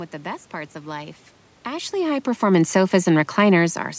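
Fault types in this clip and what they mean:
Nothing here counts as a fault; the level shift around 1.5 s is just the talker moving relative to the microphone, and the room's background noise belongs to the recording itself.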